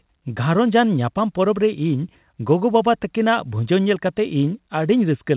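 Nothing in this speech clip stood out on listening as a technical problem.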